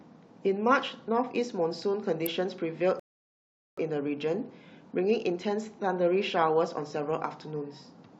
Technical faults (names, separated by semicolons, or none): electrical switching spike; rebuffering stall